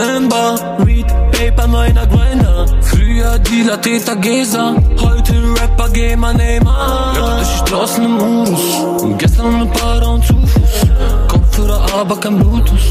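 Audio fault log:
No faults detected in this audio.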